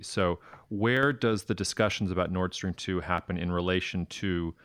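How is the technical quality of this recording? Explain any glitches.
Three sharp clicks break into the speech; nothing else stands out as a fault. They land at 0.97 s, right before "does the", at 1.92 s, just after "does the", and again at 3.18 s. Each is a single tick, a thin vertical line on a spectrogram. The likely cause is dropped samples: a fraction of a millisecond goes missing, so the waveform jumps from one value to a later one. The gap is too brief to lose any sound, but the step itself clicks.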